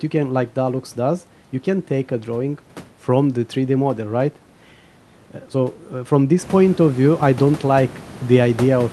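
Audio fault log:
Nothing to log here: the room's background noise gets noticeably louder around 6.5 s, up by about 13 dB but still well under the speech, and the call path comes through as you'd expect for Opus at 32 kbps with the top end stopping near 12 kHz.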